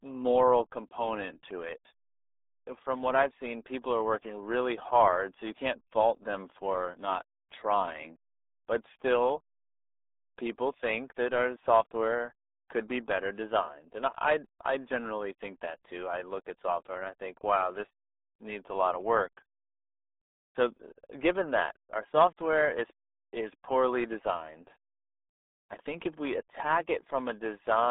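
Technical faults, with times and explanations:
Throughout, RealAudio 14.4 codec: the speech sounds muffled and gargly, squeezed into roughly a 300 Hz to 3.6 kHz phone band with nothing above 3.8 kHz. Heavy codec smearing like this fits an 8 kbit/s dial-up-era stream throwing away most detail.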